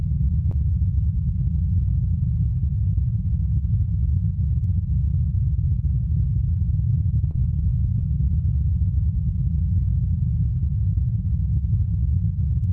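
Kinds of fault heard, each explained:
short concealed packet loss: twice, about 20 ms of audio missed the decoder, which patched each gap by extending the preceding sound, leaving brief smears near 0.51 s and 7.31 s.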